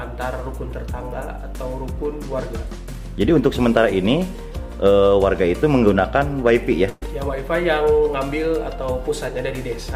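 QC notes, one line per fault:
6.89–7.03 s: burst of packet loss. About 120 ms went missing, so the last bit of sound is stretched and faded over the gap before playback jumps ahead.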